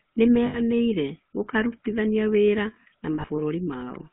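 From start to end the speech carries the GSM full-rate codec: a narrow line band of 150 Hz to 3.4 kHz plus a buzzy, gravelly roughness from its pulse-driven vocal-tract model, which fits a 13 kbps coder. The grit, not the bandwidth alone, separates it from simple telephone filtering.

Lost GSM frames strike at 0.46 to 0.60 s, an 80 ms gap, and again at 3.14 to 3.41 s, just after "gũkarutithania wĩra na", scattered over about 240 ms with no run longer than roughly 40 ms. Each gap is filled with a rough, metallic ring rather than the silence or click of a plain dropout.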